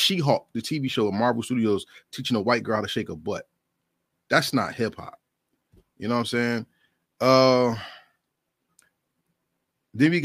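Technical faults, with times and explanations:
No technical faults can be heard in this speech clip. There is nothing to time or explain.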